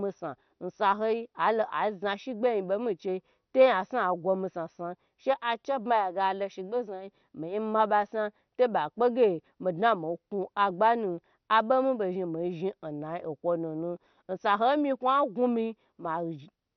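Throughout the speech, the encoder was likely MP2 compression starved of bits, in keeping with a rate near 48 kbps, so it switched off the upper sub-bands and coarsely quantised the rest. Nothing survives above 6.1 kHz, leaving the sound dull with heavy, gurgling, granular distortion.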